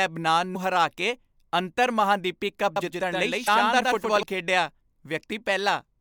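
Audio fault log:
0.52–0.56 s and 3.45–3.48 s: damaged data in a compressed stream. Each spot gives a brief chirp, squawk, click or short hole. The decoder misreads corrupted frames, loses sync, then resumes at the next frame header. The first comes just before "ਹਰਾ ਕੇ ਅੰਤਰਮਹਾਂਦੀਪੀ ਕੱਪ".
2.76–4.23 s: doubled audio track. Right after "ਹਰਾ ਕੇ ਅੰਤਰਮਹਾਂਦੀਪੀ ਕੱਪ", a full-band copy follows about a tenth of a second behind, roughly 5 dB quieter. It has no decay or room colour and starts and stops abruptly. A second, slower capture path is the likely cause.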